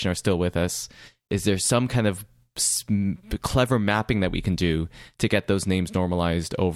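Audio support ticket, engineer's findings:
No fault found on listening to this speech clip. Nothing to attribute to any component, so no action from the audio side.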